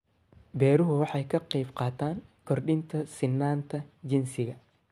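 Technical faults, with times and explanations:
No technical faults can be heard in the signal at any point.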